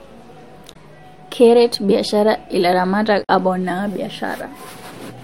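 At 0.72 to 0.76 s and again at 3.23 to 3.29 s, the speech is briefly disrupted for a few tens of milliseconds. Both are damaged data in a compressed stream: the bytes for those frames arrive corrupted, so the decoder misinterprets or discards them, loses frame sync, and produces garbled output until it locks onto the next valid frame header and resumes clean decoding.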